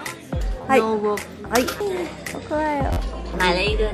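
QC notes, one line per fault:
0.62–0.64 s, repeated buffer. New audio arrived late, so the last block of about 12 ms played two extra times. That fits a 512-sample buffer. The slices are very short, so the hard joins come out as a quick click and a brief buzz rather than a clear stutter.
2.93–2.97 s, repeated buffer. The same underrun happens again, with the block repeating four extra times. The longer run gives a buzzy stutter. The sound resumes where it left off, with nothing skipped.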